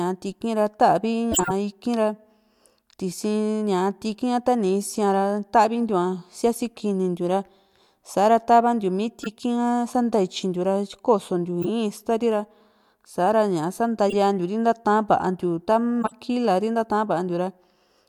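Speech with corrupt frames decoded at 1.32–1.52 s, 11.62–11.70 s, 14.09–14.14 s and 16.02–16.12 s: damaged compressed frames were played anyway, producing chirps and noise bursts at wrong frequencies, loudest in the first. At 9.23–9.32 s, compressed frames were skipped, so the audio jumps ahead by roughly 20 ms. The join there is heard as a brief blip or click.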